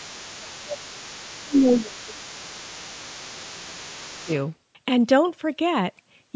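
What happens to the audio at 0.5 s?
At 0.5 s, two faults overlap. The first is speech suppressed in double talk, from 0.4 to 0.89 s. The talker's voice drops by up to about 20 dB across roughly half a second while a second voice is also present. The likely cause is an echo canceller that could not separate its own talker from the loudspeaker sound during double talk and turned both down. On a waveform the envelope visibly narrows over that span. On a spectrogram the talker's harmonics fade across the band, which stops at 8 kHz as the call's microphone processing leaves it.

The second fault is the other side's voice leaking through, present from the start to 4.37 s and so running under this moment. The far side's voice sits about 20 dB below the talker. It is likely loudspeaker playback that the echo canceller failed to remove from the microphone. On a spectrogram it appears as a weaker, separate set of harmonic traces beneath the main voice. 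In the waveform it shows as low-level activity that continues between the talker's syllables.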